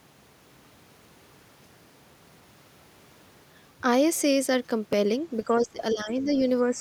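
At 4.93 s there is a brief click from overlapping chunks. Chunks about 3 seconds long overlap, so roughly 7 ms of speech plays twice at the join. From 5.46 to 6.28 s the speech dips by up to around 15 dB. It dips again, more gently, from 6.62 to 6.79 s. This is likely speech suppressed in double talk, with the echo canceller turning down the talker while the far side spoke.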